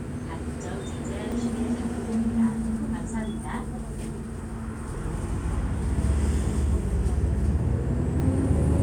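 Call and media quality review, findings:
Forward jumps at 1.32 s, 2.76 s and 8.2 s. No gap; the sound resumes further along, skipping roughly a tenth of a second at the first two and slightly less at 8.2 s. Likely dropped buffer (overrun) in capture: samples overwritten before being read, edges spliced. Differs from underrun or packet loss, which insert silence or a stretched fill rather than a skip.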